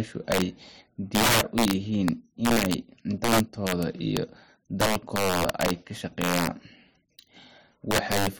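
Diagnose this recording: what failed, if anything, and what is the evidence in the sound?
Integer overflow at 0.32–0.42, 1.15–1.73, 2.08, 2.45–2.74, 3.24–4.17, 4.81–5.71, 6.22–6.47 and 7.91–8.27 s: violent cracks on loud speech peaks. In the gain or sample-format conversion stage, peaks driven about 1 to 10 dB past full scale wrapped to the opposite sign instead of being limited.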